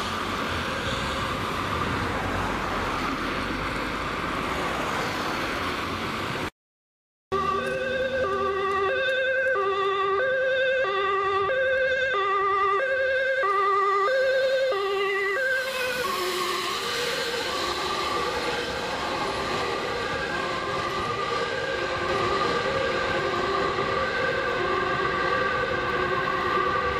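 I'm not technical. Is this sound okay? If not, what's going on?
No. A doubled audio track starts at 22.09 s and runs to the end: a second copy, about as loud as the original, trails roughly a second behind. This is likely a slower second recording path or an edit leaving two copies misaligned.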